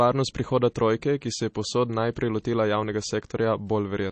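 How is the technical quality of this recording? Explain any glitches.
Technical quality is poor. Throughout the speech, likely MP3 compression leaves a hard ceiling near 8.3 kHz, flat and empty above on a spectrogram, plus plainly audible watery, swirly smearing that fits a very low bitrate around 32 kbps.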